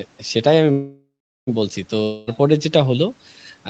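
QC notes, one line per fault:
0.71–1.49 s, call audio freeze: the sound stops moving forward and the last fragment is stretched into a fading buzz for roughly the first 0.38 s, then about 0.38 s of near-silence follows before the speech resumes exactly where it left off. This likely comes from packets held up in transit so the jitter buffer ran dry. Unlike a dropout, nothing is skipped; the clip simply runs about 0.76 s later from here on.
2.03–2.29 s, long network dropout: about 0.24 s of the speech never plays, replaced by a concealment buzz that decays but is still audible when the audio returns, with no stretch of true silence. When the speech comes back it has jumped ahead, so the lost portion is simply absent. This is likely a run of packets that never arrived. Unlike the freeze, the timing does not shift; the missing content is what gives it away. Both gaps sit within the 8 kHz band of the Opus call path.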